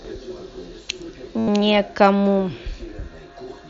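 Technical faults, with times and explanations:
0.00–1.96 s, doubled audio track: a second copy, likely from a slower capture path, trails about 0.7 s behind, roughly 5 dB quieter, dry, then stops abruptly.
1.38–1.48 s, concealed Bluetooth headset packet loss: about 90 ms of headset packets went missing, and the repeated waveform fill sounds like a steady buzzy tone ending in a slight warble.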